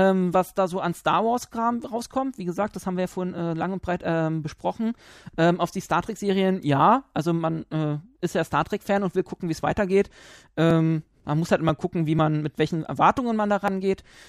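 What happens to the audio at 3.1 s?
At 3.1 s the speech continues cleanly, with no dropout, glitch or other fault at that moment.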